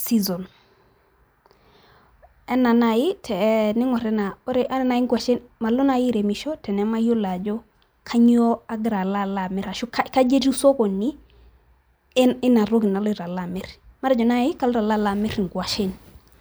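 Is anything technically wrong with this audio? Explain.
No, nothing technically wrong can be heard anywhere in this speech recording.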